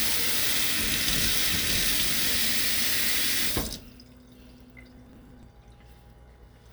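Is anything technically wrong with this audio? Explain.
Yes. From 4.97 to 5.43 s a gritty burst of crackle tears across the sound and then stops. This is processor overload crackle: the processor repeatedly missed its deadlines, and each skipped buffer left a hard-edged gap. The gap spacing suggests buffers of around 10 ms, with roughly fifteen lost over that stretch.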